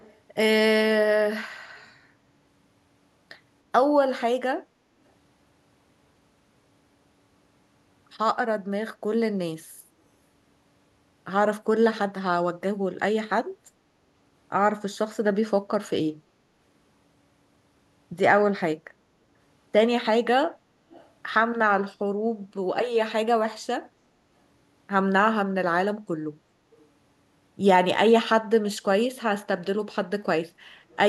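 Speech with four short bursts of echo leak, at 0.0–0.18 s, 20.91–21.1 s, 26.71–26.86 s and 30.9–30.96 s. A very faint delayed copy arrives about 307 ms late at first, then 387 ms, likely residue that a far-end loudspeaker echo canceller missed. On a spectrogram, these appear as weak, shifted repeats of earlier harmonic bands.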